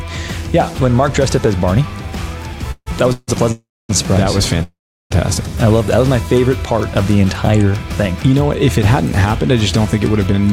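Four call audio freezes fall at 2.71 to 2.88 s, 3.12 to 3.30 s, 3.52 to 3.91 s and 4.63 to 5.12 s. Each stretches the last sound into a fading buzz, then near-silence, likely from held-up packets draining the buffer. Then a jitter buffer speed-up runs from 10.32 s to the end. Removing about 40 ms makes the sound run 114% fast at unchanged pitch.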